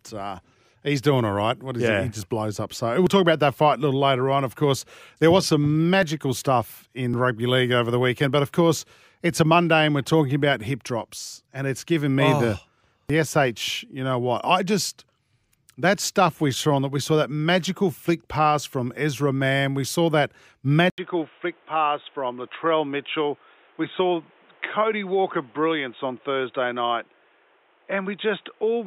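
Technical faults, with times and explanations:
20.9–28.86 s, input switched to a poorer device: just after "saw that" the sound drops out for 80 ms and returns dull and boxy, with nothing above 3.8 kHz. It is roughly 5 dB quieter over a new noise floor about 35 dB down, likely from a switch to a narrower-band input.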